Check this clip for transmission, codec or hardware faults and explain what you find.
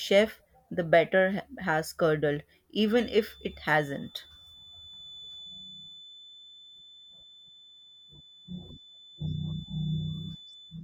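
One fault is present: a feedback whistle from 2.82 s to the end of the speech. A thin, steady 3.5 kHz tone sits well below the speech level and swells and fades slowly. The likely cause is a loudspeaker-to-microphone loop held just short of runaway, so one frequency rings on. That unsteady level sets it apart from a fixed electrical interference tone.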